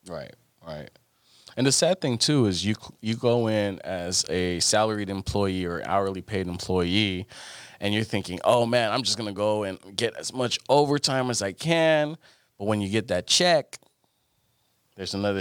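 From 13.32 to 13.99 s the speech suddenly runs about 5.9% fast and rises 99 cents, nearly a semitone, then snaps back. That's likely a drift correction step, where clock-matching software briefly changed the playback rate to rebalance its buffer.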